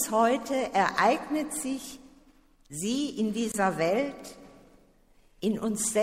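At 3.52 s, running to 3.54 s, the audio has a gap at a join of encoded pieces: a hole of about 22 ms opens in otherwise continuous sound. Two separately encoded segments were butted together without trimming, so the start-up delay and last-frame padding that each encoder pass leaves were kept in the file. The dropout is heard as a brief break, its edges smeared by the codec, after which the sound resumes exactly where it stopped.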